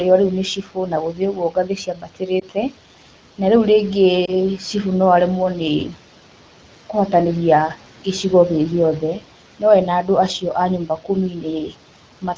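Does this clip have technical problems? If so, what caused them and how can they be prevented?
Yes, two kinds of fault are audible.

Speech cut by the noise suppressor: the call's noise suppressor misjudged parts of the speech as background and pulled them down along with it. This happens from 0.56 to 2.74 s (roughly 0.7 s of it affected, dipping by about 12 dB), from 5.88 to 5.97 s (about 11 dB), and from 10.86 to 11.75 s (roughly 0.3 s affected, about 11 dB). In those stretches soft consonants and word endings sound swallowed or suddenly faint. Prevention: use gentler suppression with slower release, or tune its speech detection so low-level speech isn't classed as noise.

Lost AMR speech frames: single frames failed their checksum on the radio link, at 2.40–2.44 s and again at 4.25–4.33 s. Each time the AMR-WB decoder, running at 12.65 kbit/s, filled the gap of one 20 ms frame by repeating the previous pitch and vocal tract settings at reduced gain. 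What you hear is a brief dip or warble, with the sound a little rough for a moment as it recovers. Prevention: improve radio conditions or add stronger error protection and redundancy on the link so frames arrive intact.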